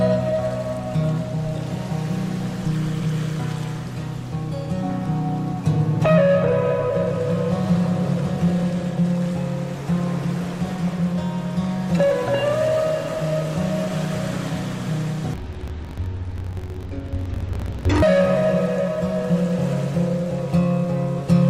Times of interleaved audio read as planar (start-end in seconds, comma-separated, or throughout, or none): 15.34-18.03